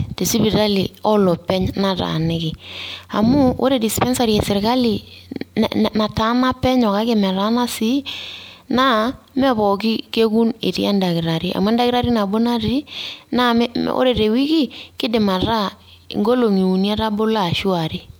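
Repeated lossy re-encoding, likely about three passes through MP3 at a rate consistent with 128 kbit/s, has caused generation loss across the whole speech clip. Each pass re-quantises on a shifted frame grid, so the sound is swirly, hollow and smeared, with blurred consonant attacks.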